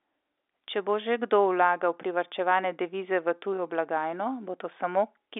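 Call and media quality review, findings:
Nothing to flag on this one: the speech comes across as ordinary G.711 phone-line audio, with the usual narrow telephone band, and no faults turn up anywhere in the clip.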